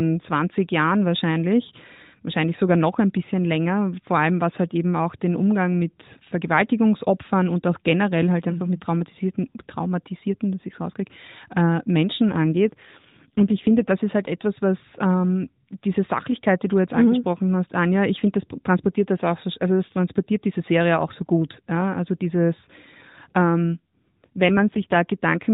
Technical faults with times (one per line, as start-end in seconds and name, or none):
12.32-13.92 AMR rate drop
23.65-24.97 AMR rate drop